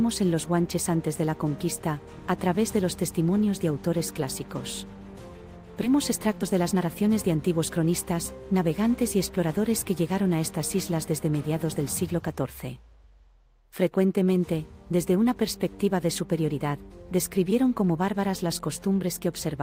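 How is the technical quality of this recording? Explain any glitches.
The recording has two glitches.

At 5.83 to 5.85 s there is a skip ahead. About 0.4 s of audio was discarded. Playback jumps forward with no gap filling the join.

From 5.94 to 7.91 s comes a jitter buffer speed-up. Short pitch-period pieces are repeatedly cut, roughly 0.2 s in total. Sound runs at 111% speed, same pitch, hurried.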